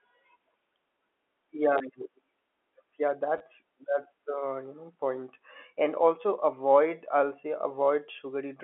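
Speech heard over a telephone-band G.711 line limited to about 300 Hz to 3.4 kHz, where packets went missing twice and the receiver filled each gap by replaying the last packet (packet loss with last packet repeated). Each 20 ms repeat, from 1.78 to 1.80 s and from 3.38 to 3.40 s just before "that's the you know", fits two 10 ms packets and is heard as a brief robotic stutter.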